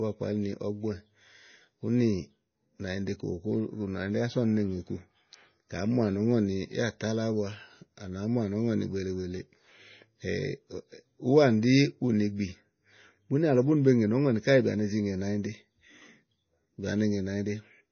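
Throughout the speech, everything above about 6.5 kHz is missing, and the sound has a plainly audible watery, swirling quality with smeared s sounds. This is likely MP3 compression at a very low bitrate, around 24 kbps, which cuts the treble and lets weak frequency lines flicker.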